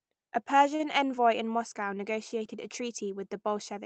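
At 0.75 s a packet arrived late and the jitter buffer ran dry, causing a short stall from a late packet. The receiver held the last sound for about 39 ms, from 0.75 to 0.81 s, then resumed where it left off just before "envoy in". Nothing is skipped, but that sound lingers unnaturally with a slight buzz or dip, and everything after it lands about 39 ms later. The Opus call path's 8 kHz band limit, consistent with a bitrate around 24 kbps, dulls the top end throughout.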